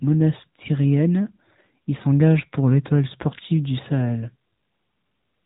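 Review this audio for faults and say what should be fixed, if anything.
The speech carries AMR narrowband mobile codec damage throughout. Nothing passes above 3.8 kHz, which points to 8 kHz sampling. A vocal-tract model rebuilds each 5 ms from 2 to 10 pulses. The plainly audible coloring fits a higher-rate mode near 10 kbps. Prevent it by capturing or transferring the speech over a wideband path instead of a narrowband phone link.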